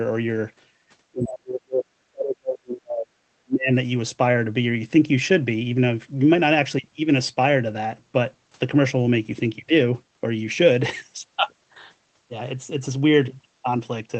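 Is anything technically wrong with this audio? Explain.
Yes. Speech suppressed in double talk, at 1.12 to 1.93 s, 2.11 to 3.18 s and 3.37 to 3.72 s: the speech sinks by roughly 40 dB or cuts out in pieces, likely an echo canceller muting both overlapping talkers.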